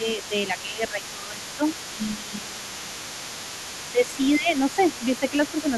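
A speech recording in which the talker's level sinks by roughly 10 dB in patches between 0.0 and 2.97 s, for about two seconds in total, and again for around half a second between 3.88 and 5.67 s. This is speech suppressed in double talk, likely from an echo canceller turning everything down while both ends spoke at once. Unlike a simple level fade, the dips follow the overlap with the second voice. That second voice is the other side's voice leaking through, audible from 0.0 to 5.77 s at about 15 dB under the talker. It is a separate voice riding underneath rather than a delayed copy of the talker, which sets it apart from ordinary room reverberation.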